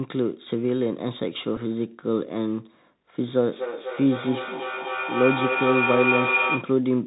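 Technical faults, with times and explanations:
Throughout: Bluetooth CVSD headset codec. The speech is squeezed into a narrowband channel with nothing above 4 kHz. The one-bit up-or-down coding, consistent with a 64 kbps link, can't track loud high sounds, so sibilants turn scratchy and a granular hiss sits beneath the speech.
1.56 s: Bluetooth headset packet repeated. About 7.5 ms of audio goes missing, consistent with two lost packets. The chip decodes the previous packet's bits again to fill the gap, and the repeat every 3.75 ms makes a brief buzz near 267 Hz until good packets return.
3.52 to 6.79 s: feedback howl. A microphone-to-loudspeaker loop between two devices on the same call gains level on each pass. It narrows to a tone near 2 kHz, with the loop repeating roughly every 300 ms, and peaks at about 1 dB below the speech before the loop breaks.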